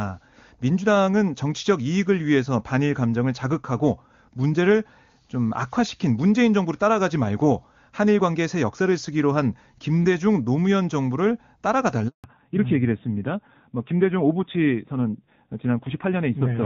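From 12.08 to 12.24 s the speech cuts out, fading within a few tens of milliseconds into 160 ms of silence. This is a handover gap: the phone moved the call to another network, and no speech frames arrived during the switch, so that stretch is simply lost.

From 12.24 s to the end, the speech sounds duller and rougher, with nothing passing above 4 kHz. This is a fallback to narrowband. The call left the clear HD Voice link, which fits AMR-WB at 23.85 kbit/s, for an older narrowband codec, likely AMR-NB at 7.4 kbit/s.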